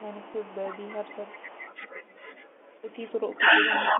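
From 0.0 to 1.7 s, a faint copy trails the speech by 332 ms. This echo leak likely means an echo canceller missed some loudspeaker pickup.

At 0.32 to 0.34 s, one 20 ms packet is lost. The last packet is repeated in its place, giving a small blip.

Speech suppressed in double talk comes next. The level dips slightly at 0.64 to 0.69 s and 1.42 to 1.46 s. From 3.24 s to the end it drops around 15 dB, likely from echo-canceller ducking.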